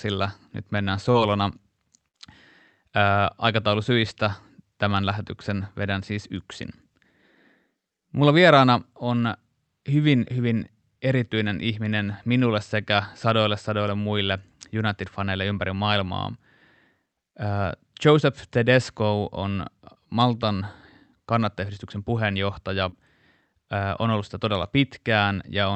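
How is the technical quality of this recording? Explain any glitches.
The recording has three network glitches, all typical of a video or voice call. It went through an Opus call codec whose audio stops around 8 kHz, which fits a call-grade setting.

Short concealed packet loss happens at 1.11 to 1.16 s and again at 22.89 to 22.95 s. About 20 ms and 40 ms of audio never arrived in time, so the receiver filled roughly 24 ms and 36 ms by carrying the last sound forward, either from its pitch or as shaped noise, and then blended back into the real signal. Each one comes across as a quick smear or wobble.

The burst of packet loss comes at 2.08 to 2.15 s. This time about 60 ms of audio went missing, and the receiver covered a gap of around 54 ms by continuing the last sound while fading it down. You hear that as a brief held buzz or a dying hiss. The audio then picks up a little further along, with the stretch in between simply gone.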